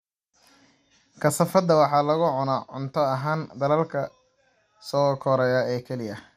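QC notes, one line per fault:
Throughout, MP2 compression: speech sounds dull and gurgly-granular, with nothing above 15.1 kHz, likely an MP2 encode near 80 kbps starving the upper sub-bands.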